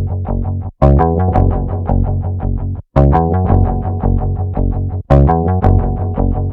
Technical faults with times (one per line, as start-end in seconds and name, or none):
0.82-1.40 hard clipping
1.90 hard clipping
2.97-3.18 hard clipping
3.54 hard clipping
5.11-5.69 hard clipping